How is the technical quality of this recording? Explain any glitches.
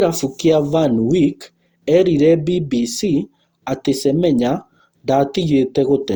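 The recording is degraded throughout by generation loss. Across the whole speech clip the sound is swirly, smeared and hollow, with blurred attacks, more damaged than a single encode would leave it. The likely cause is repeated lossy coding: the texture fits Opus at around 64 kbit/s applied about four times. Each decode and re-encode quantises again on a shifted frame grid, so noise accumulates, while content still reaches about 20.2 kHz.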